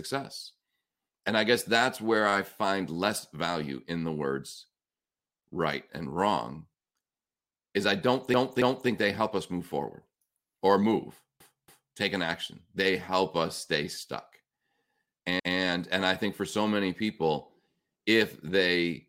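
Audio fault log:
8.34–8.90 s, 11.40–11.96 s and 15.40–15.58 s: repeated frames. A short run of compressed frames was delivered more than once, so the decoder played the same stretch again. At 8.34 s and 11.40 s a 278.6 ms block plays twice more, adding 557.3 ms each time. At 15.40 s a 185.8 ms block plays once more. Each event is a stutter in the speech.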